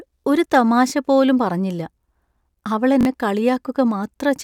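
At 0.90–0.92 s, between "ഒരു തമാശ" and "പോലും പറഞ്ഞില്ല", and again at 3.01–3.05 s, a repeated buffer occurs. Late audio made the device replay a 21 ms block (fitting a 1024-sample buffer), twice then three times. Each is heard as a brief stutter. The waveform shows identical copied segments, and the spectrogram shows vertical seams at the hard joins.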